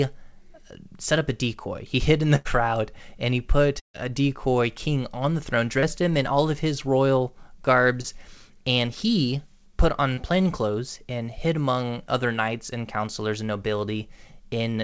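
At 2.36 to 2.48 s and 3.80 to 3.97 s, bursts of packet loss leave gaps of about 90 and 150 ms. The receiver holds the last sound and fades it, the second gap going quiet for about 130 ms, before resuming further on.

Short concealed packet losses at 5.80 s (after "king on the throne"), 8.01 s and 10.14 s are far briefer, roughly 30 ms each, and heard as quick smears that blend straight back in. The G.722 call path carries nothing above 8 kHz.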